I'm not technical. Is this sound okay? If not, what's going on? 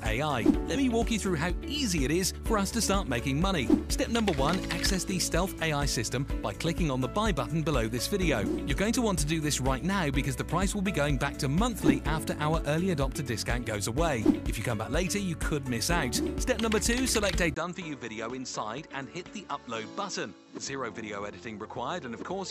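No. At 17.54 s the recording likely switched its input to a poorer device, such as another microphone. After a brief 20 ms gap, the sound turns duller, losing everything above 7.7 kHz, gets somewhat quieter, and picks up faint new background noise through to the end.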